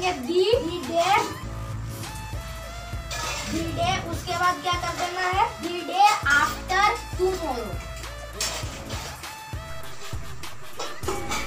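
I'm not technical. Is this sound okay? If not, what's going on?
No. At about 9.70 s there's a single low thump or click, while the sound carries on unchanged. This is a DC step: the waveform's resting centre line suddenly jumps to a new level and stays shifted right to the end.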